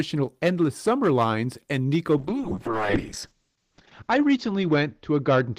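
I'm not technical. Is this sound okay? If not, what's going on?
No. The speech has two faults.

The first is hard clipping, and it runs through the whole clip. The speech was recorded or processed louder than one stage in the chain could handle, so the tops of the loudest moments were sliced off flat. Only a small share of the sound is affected, but each flattened peak adds a brief crackly, gritty edge on the loudest syllables.

The second is a call bitrate drop starting at 2.23 s and lasting to the end. The connection's capacity estimate fell, so the call software had far less data to describe the sound with. It coded the speech much more coarsely and discarded everything above about 8 kHz. From that point the speech turns muffled and rough, and it sounds worst for about 1.8 seconds of that stretch.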